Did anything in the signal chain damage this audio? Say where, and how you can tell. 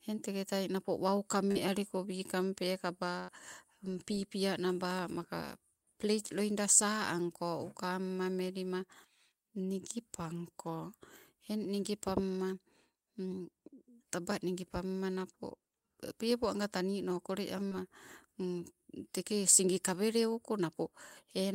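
Yes, the network damaged it. Short concealed packet loss occurs at 1.51 to 1.58 s and 17.68 to 17.74 s. Each time, 40 ms never arrived in time. The receiver stretched the preceding sound over the gap, for 39 ms and 30 ms, then blended back. It is heard as a brief smear.

A burst of packet loss, also on the network, hits at 3.19 to 3.31 s. About 80 ms was lost in a row. The receiver continued the last sound for 88 ms, turning it down as it went. Playback then resumed further on, with that stretch gone.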